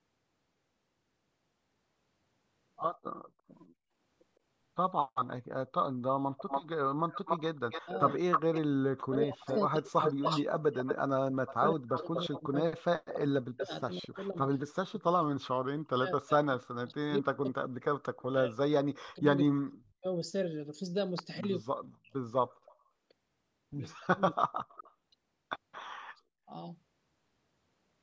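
From 3.26 to 3.93 s the room background is gated by the echo canceller. While the loudspeaker side is playing, the canceller clamps the mic hard, so the ambience dips by about 33 dB for around 0.4 s in total and then comes back.

At 4.91 to 5.27 s there's a faint echo leak. A copy of the speech arrives 160 ms late, about 35 dB down, likely because the far end's canceller didn't fully remove what its mic picked up from its loudspeaker. From 6.37 to 13.63 s the leak gets much worse. The echo trails by 286 ms and sits only about 5 dB under the speech, so it's clearly audible as a second, delayed layer.

Overlapping that, from 7.69 to 20.07 s, the speech is suppressed in double talk. When both sides talk at once, the canceller likely can't tell its own talker from the echo and turns everything down. The voice dips by as much as about 40 dB, for roughly seven seconds in total. The same thing happens more briefly at 21.41 to 22.15 s, for about half a second with drops of about 40 dB, and at 23.99 to 24.42 s, with drops of about 35 dB.

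The echo leak returns at 22.66 to 22.8 s and again at 24.68 to 25.83 s, both times with a 231 ms delay. The first is about 30 dB below the speech and the second about 20 dB below, the same likely cause as before.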